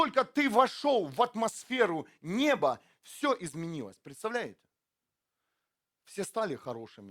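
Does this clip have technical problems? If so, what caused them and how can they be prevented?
No, nothing in this speech recording stood out as a technical problem on listening.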